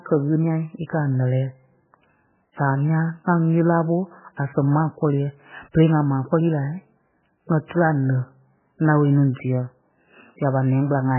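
From start to finish the speech has nothing above 3 kHz and a watery, swirling texture, with metallic chirps on s sounds and smeared consonant onsets. The likely cause is heavy MP3 compression at a bitrate that sounds as low as 8 kbps. Short of bits, the encoder cuts off all treble at a fixed point and drops weaker frequency lines, which then flicker in and out from one frame to the next.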